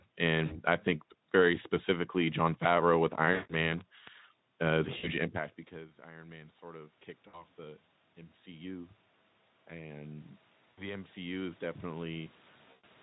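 VoIP packet loss concealed by the speech codec breaks into this speech recording six times: at 0.45 to 0.61 s, just before "i think very specifically"; at 3.33 to 3.54 s; at 4.97 to 5.10 s, just before "impact because"; at 7.27 to 7.44 s; at 10.71 to 10.93 s; and at 12.71 to 12.85 s. Each time, audio goes missing for about 60 ms, or 160 ms and 120 ms in the second and last gaps, which fits 20 ms codec frames. The decoder fills the gap by repeating its last pitch and spectral shape at falling gain, so the sound smears into a fading buzz and stays weak or rough for tens of milliseconds after real audio resumes. Automatic gain rising follows from 6.0 to 8.99 s, after "impact because." The talker moves away around 5 s and the input drops by about 24 dB, so the gain control slowly adds about 8 dB, and voice and room noise swell together over several seconds. It rises again by about 6 dB from 9.68 to 12.36 s, with the same gradual joint lift in level. 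Underneath, light Speex coding at 15 kbps and call processing that takes out the lowest bass shape the overall tone.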